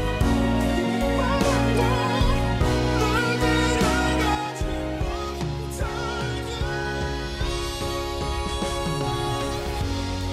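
A sudden gain jump occurs at 4.35 s: the level drops by about 6 dB from one sample to the next and stays at the lower level through to the end of the clip. The sound and the background noise fall together, with no fade or ramp. This is likely a digital gain setting or bit shift applied instantly rather than smoothed over several milliseconds.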